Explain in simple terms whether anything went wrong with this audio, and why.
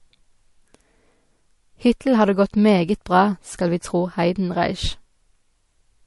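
MP3 compression across the whole clip: this speech sounds watery, with nothing above about 11.3 kHz, likely because the encoder ran short of bits and discarded detail.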